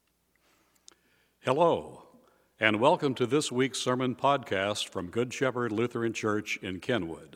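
No technical faults turn up anywhere in this speech recording.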